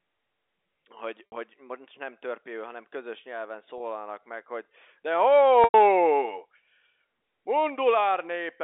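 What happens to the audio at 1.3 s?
From 1.27 to 1.32 s the sound briefly holds on a slightly buzzy, frozen tone before "most nem törpéül hanem" resumes. This is packet loss with pitch repetition: about 60 ms of audio went missing, which fits three 20 ms packets, and the receiver bridged the gap by repeating the last pitch period.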